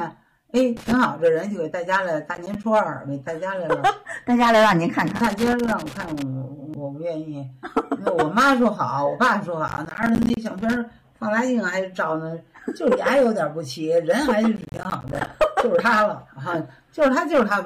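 Hard clipping runs through the whole clip. The signal is driven roughly 10 dB past what one stage can pass, so a small share of peaks are cut flat. On the waveform these appear as squared-off tops. On a spectrogram they show as high harmonics smeared upward, and they are heard as a crackly edge on loud moments.

Loose connector crackle arrives at 0.77 to 0.93 s, then 5.07 to 6.22 s, and again at 10.58 to 10.77 s. A dirty or worn contact keeps making and breaking, chopping the signal into an irregular scratchy burst. The waveform shows ragged dropouts, and the spectrogram shows scattered broadband vertical streaks.

Processor overload crackle falls at 2.35 to 2.64 s, 9.68 to 10.37 s and 14.56 to 15.27 s. Deadlines for short audio buffers are missed repeatedly, which fits buffers of around 10 ms. Each miss leaves a hard-edged silent gap. The sound tears grittily, and the later two bursts are denser and longer. 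The waveform shows a comb of tiny gaps, and the spectrogram shows vertical lines.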